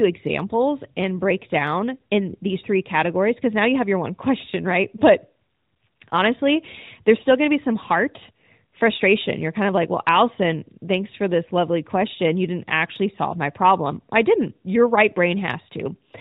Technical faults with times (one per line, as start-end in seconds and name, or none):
none